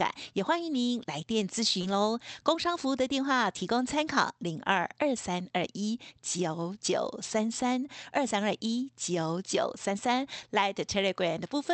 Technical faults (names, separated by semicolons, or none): lost packet rebuilt from error correction; short concealed packet loss